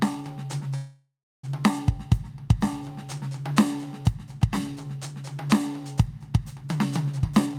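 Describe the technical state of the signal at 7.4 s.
At 7.4 s the music is inside a jitter buffer speed-up running from 7.17 to 7.58 s. The receiver trimmed short pitch-period slices, about 150 ms in all, so playback runs near 139% speed and the tempo rushes. Unlike a resampling speed-up, the pitch stays unchanged.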